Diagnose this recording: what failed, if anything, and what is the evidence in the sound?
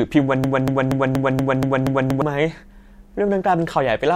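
The playback or streaming stage most likely stalled and kept re-sending its last buffered fragment, a broken-record loop. From 0.44 to 2.22 s, a 0.24 s slice of speech repeats seven times back to back, and the speech that belonged in that stretch is lost.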